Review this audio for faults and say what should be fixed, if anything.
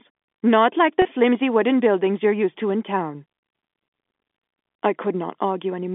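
Packet loss with pitch repetition occurs at 1.02 to 1.05 s. About 30 ms of audio drops out, which points to a single lost packet. The receiver fills the gap by repeating the last pitch period, giving a brief, slightly held buzz. A jitter buffer with forward error correction would prevent it.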